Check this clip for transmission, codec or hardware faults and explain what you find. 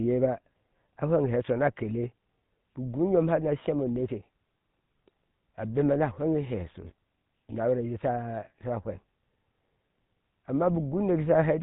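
The speech carries one codec fault from start to finish: GSM full-rate coding. The codec rebuilds the voice from a vocal-tract model fed by a coarse, regularly spaced pulse train, which fits a 13 kbps rate. The result is a plainly audible buzzy, gravelly roughness, with nothing above 3.8 kHz. That grainy excitation texture, rather than the band limit alone, separates it from simple narrowband filtering.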